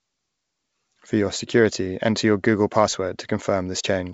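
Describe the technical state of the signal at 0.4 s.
At 0.4 s the audio is intact, with no fault present, the speech carried through G.722 wideband telephone coding at 64 kbit/s with nothing heard above about 7.7 kHz.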